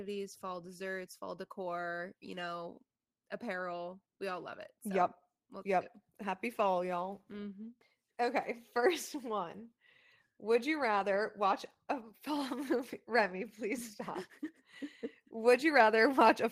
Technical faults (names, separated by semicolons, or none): none